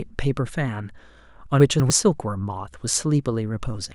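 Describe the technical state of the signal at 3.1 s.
At 3.1 s the speech signal is intact, with no audible fault at that point.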